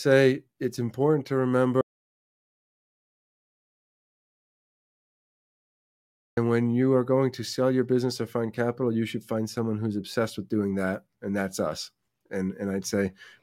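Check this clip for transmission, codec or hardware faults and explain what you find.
There is one fault: an audio dropout to silence from 1.81 s to 6.37 s, losing about 4.56 s of speech. The sound cuts off right after "it's important to" and returns abruptly at "when you are going". The gap is dead digital silence with no room tone, likely because the input was lost while the recorder kept writing zeros. A waveform shows a flat line, and a spectrogram shows an empty band across all frequencies.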